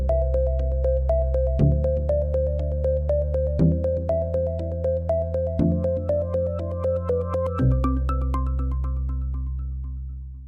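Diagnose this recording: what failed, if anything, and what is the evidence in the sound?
No faults detected in this recording.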